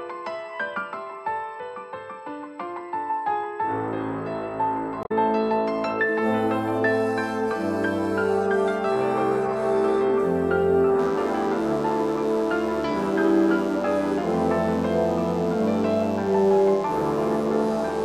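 Damaged data in a compressed stream shows up from 5.00 to 5.12 s. For about a tenth of a second the decoder reads corrupted bytes and either misinterprets or discards the affected frames. It then loses its place in the bitstream and must hunt for the next valid frame header before playback can resume. The result is a short chirp, squawk, click or hole where the sound should be.

DECT cordless phone buzz begins at 11.0 s and runs to the end of the clip. A nearby DECT handset or base transmits a radio burst every 10 ms, and somewhere in the audio chain that energy is rectified into the signal path. The 100 Hz burst rate becomes a thin, steady, harmonic-rich buzz sitting around 25 dB below the main sound, continuous rather than intermittent.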